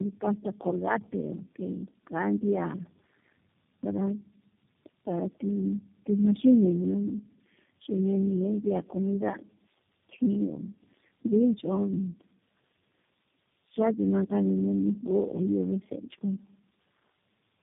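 Throughout the clip, the speech bears the marks of tandem speech coding: the call seems to have crossed several network links, each running its own speech codec, so it was decoded and re-encoded at every border. The sound fits about four such coders in a row, with G.729A last. Each one compressed the previous one's errors, leaving the speech rough, muffled and warbly, with nothing above 3.7 kHz.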